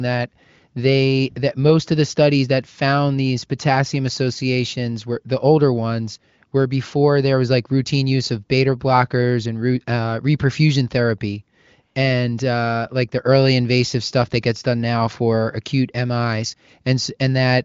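Nothing goes wrong anywhere in this speech clip; it's just an AMR wideband (HD Voice) call path doing its job, with the sound topping out at about 7.6 kHz the way that codec leaves it and none of the roughness of its lower rates, which fits it running at 23.05 kbit/s, one of its highest rates.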